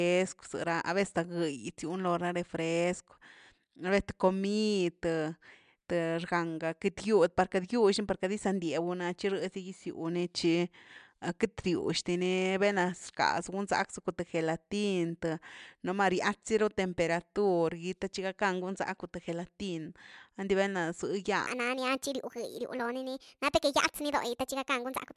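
Speech recording with a wrong sample rate fault from 21.47 s to the end at 25.16 s. Playback runs 1.45 times fast and about 6.5 semitones high, which fits 22 kHz material played at 32 kHz without conversion, so speed and pitch rise together.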